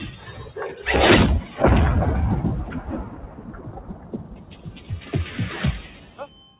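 A speech-tuned noise suppressor stays active across the whole clip, treating sustained tones and decaying tails as noise. Level swings by roughly 15 dB as attacks pass and held sound sinks. On a waveform the envelope pumps, and a spectrogram shows tails collapsing into dark gaps. The band stops near 4 kHz, consistent with a G.711 mu-law call at 64 kbps.

The suppressor cuts the sound itself at 3.13 to 4.13 s for most of that second, at 4.29 to 4.9 s for about half a second, and at 5.94 to 6.19 s. Each dip reaches about 6 dB, so sustained parts thin and their decay ends early. The waveform narrows there, and the spectrogram fades in patches.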